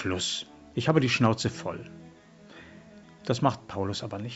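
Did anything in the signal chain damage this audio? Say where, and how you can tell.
No, nothing stood out on listening; the sound comes through the call microphone processing and the Opus call path with its content ending around 8 kHz, which is what that path normally produces.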